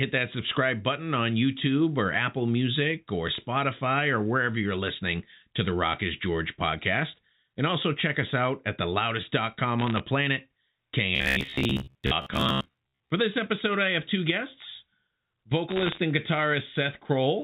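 Bit errors on a digital phone line crackle through the speech from 9.79 to 10.00 s and again from 15.70 to 15.98 s. Flipped bits in the A-law stream each corrupt a single 8-bit sample. Hits on the sign or upper bits throw that sample far from its neighbours and produce a sharp tick. Many of these clustered in a fraction of a second form a brief burst of crackle over the speech.

Robotic sound from repeated short buffers takes over from 11.16 to 13.10 s. The speech collapses into a rigid, metallic buzz at about 66.8 Hz that still roughly follows the syllables. That fixed pitch points to roughly 15 ms chunks of audio being replayed, likely because new buffers arrived too late and the playback software looped the last one. About half of what is heard there is repetition, and the real audio in between is lost.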